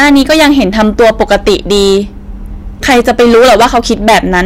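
Hard clipping runs right through this speech clip: the level was pushed about 16 dB past what the stage could pass, so something like one sample in seven gets its peak sliced flat. Those squared-off tops spray high harmonics, giving a constant harsh fuzz on every loud syllable.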